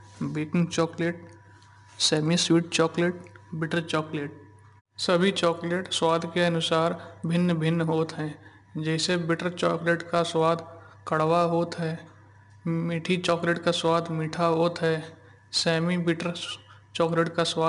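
From start to finish the speech carries 4-bit ADPCM compression, and the damage is plainly audible. Each sample is coded as a coarse 4-bit step from a prediction, so the error rides along as a gritty hiss that swells and fades with the voice's loudness. Unlike a perceptual codec's swirly, watery artefacts, this is broadband grit. Nothing reaches above 10.6 kHz, which dulls the top, and the data rate fits about 89 kbps.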